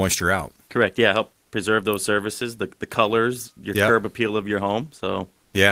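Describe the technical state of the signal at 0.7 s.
At 0.7 s the speech signal is intact, with no audible dropout, distortion, clipping or other fault at that point.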